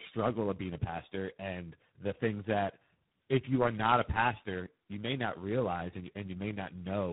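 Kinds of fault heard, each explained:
Tandem speech coding: the speech has passed through three different low-rate speech codecs in succession, with 64 kbit/s G.711 links between them, and each stage re-encodes the previous stage's already damaged output. The chain sounds like GSM full rate, then iLBC, then G.726 at 24 kbit/s. Throughout the clip the voice is rough and muffled with a warbly, swirling quality, and nothing remains above about 3.9 kHz.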